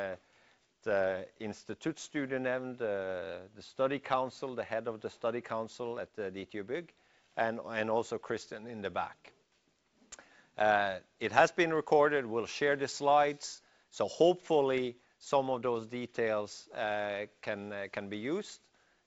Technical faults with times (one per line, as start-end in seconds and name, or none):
none